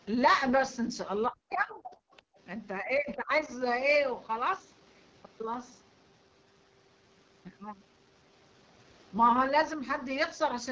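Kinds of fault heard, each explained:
AMR wideband (HD Voice) codec: Throughout the clip, the speech has the rough, raspy texture of this codec's lowest rates, which fits a setting near 8.85 kbit/s. A pulse-driven vocal tract model carries the band, padded with shaped noise near the top, and nothing passes above 7.2 kHz.
Speech suppressed in double talk: From 1.28 to 1.97 s the talker's voice sinks by something like 40 dB, and from 2.81 to 3.31 s by around 20 dB. This is likely an echo canceller turning the talker down because it could not separate that voice from the far end playing at the same time.
Other side's voice leaking through: At 2.12 to 2.22 s a brief, faint scrap of a second voice appears, far below the main speech. This is likely far-end audio from the loudspeaker that the echo canceller failed to remove from the microphone signal.
Background gated by the echo canceller: At 2.25 to 2.37 s the room sound drops out by about 40 dB for roughly a tenth of a second, then returns. 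The canceller clamped the microphone hard while the loudspeaker played and then released it.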